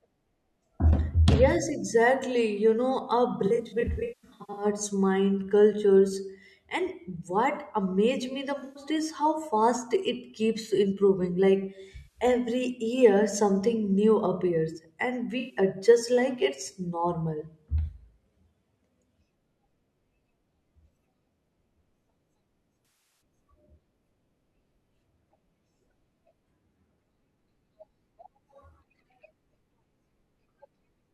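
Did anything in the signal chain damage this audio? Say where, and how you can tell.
Yes. AAC frame loss with concealment at the codec/network stage, at 3.46–4.65 s, 8.58–8.83 s (after "what amazed me the"), 11.97–12.20 s, 15.39–15.57 s and 22.85–23.21 s. Each gap is patched from the previous spectrum, giving smeared, phasey stretches instead of clean dropouts.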